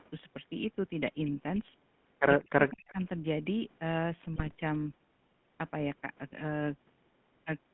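GSM full-rate codec coding runs through the whole speech recording: the band sits roughly between 150 Hz and 3.4 kHz, and the pulse-driven vocal-tract model leaves a buzzy, gravelly roughness across the voice, which fits a 13 kbps full-rate stream. Speech suppressed in double talk appears from 2.45 to 2.99 s, likely from an echo canceller clamping down while both ends talked: the voice dips in patches totalling about 0.4 s, at its deepest by around 40 dB, as the canceller confuses the talker with loudspeaker echo. GSM bit errors strike from 4.36 to 4.55 s, where corrupted filter, pitch and gain parameters distort the spectrum frame by frame, producing squawks, pops and gargling over a stretch that points to about ten damaged frames at a bit error rate near 1.9 percent.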